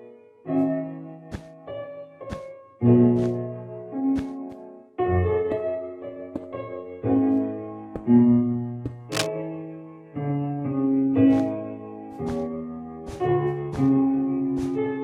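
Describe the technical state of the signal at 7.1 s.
At 7.1 s the signal is intact, with no dropout, clipping, distortion or other fault audible at that point.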